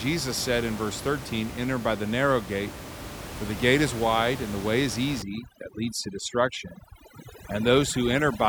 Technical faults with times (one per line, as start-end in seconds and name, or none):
5.22-8.49 overdone noise removal